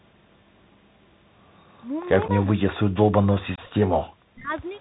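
The Bluetooth CVSD headset codec shapes the whole clip. Its one-bit, 64 kHz delta coding lets nothing through above 4 kHz, and the adaptive step lags on sharp, bright sounds. The result is plainly audible: scratchy s sounds, distorted loud peaks and a granular hiss underneath the speech.

Unconcealed Bluetooth headset packet loss hits at 2.28 s, when 7.5 ms of audio drops out between headset and phone and nothing fills the gap. It is heard as a brief hole with abrupt edges.

From 2.46 to 3.91 s the speech dips repeatedly, for about a second in total and by as much as 40 dB at the deepest. This is likely speech suppressed in double talk: the echo canceller, unable to tell the talker from loudspeaker echo, turns the voice down in pieces.

A second unconcealed packet loss at 3.56 to 3.60 s removes 22.5 ms, which fits several consecutive packets going missing. It makes a longer gap, and the speech returns with a hard edge.

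Another likely double-talk suppression follows from 4.21 to 4.54 s, pulling the speech down in pieces for about 0.3 s, again by roughly 40 dB at worst.

From 4.50 to 4.62 s a very faint copy of the voice arrives 396 ms late, about 40 dB below the speech. This is likely an echo leak, where the far side's loudspeaker output reached its microphone and escaped cancellation.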